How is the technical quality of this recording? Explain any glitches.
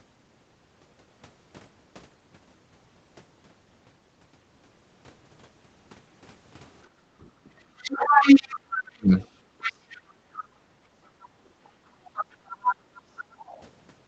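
It's a call-path recording with a cluster of echo-canceller trouble in the second half. The whole thing has the band-limited sound of a call, with nothing above 8 kHz, which fits the Opus codec at a modest rate of around 32 kbps. The problems are three kinds of echo-canceller misbehaviour.

Background gated by the echo canceller: the room tone dips four times. It drops about 13 dB from 6.88 to 7.53 s, then about 11 dB across 9.73 to 11.17 s for roughly a second in total, then short dips of about 13 dB at 12.04 to 12.16 s and about 10 dB at 13.26 to 13.38 s. Each time the canceller thought the far end was playing and clamped the mic down, so the ambience briefly sinks and then swells back when it releases.

Other side's voice leaking through: from 7.78 to 10.44 s a second voice is audible, and it's roughly as loud as the talker. It comes back from 11.64 to 13.6 s, but this time well down, about 15 dB under. 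The likely cause is the far end's loudspeaker playback reaching the mic without the canceller fully subtracting it, so its residue rides along with the near-end speech.

Speech suppressed in double talk: between 8.9 and 9.11 s, the talker's own voice is knocked down very hard, to the point of practically vanishing for about 0.2 s. That lands right inside the first leakage stretch, when both sides were going at once. The likely cause is the canceller failing to tell its own talker apart from the loudspeaker echo and ducking everything together, so you hear a brief hole in the near-end speech.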